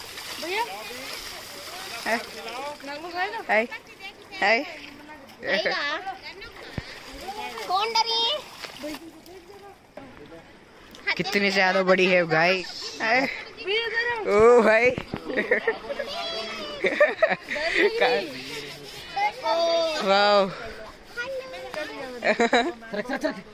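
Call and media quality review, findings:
No transport, capture or processing faults were found anywhere in the signal, and no further action is needed on this item.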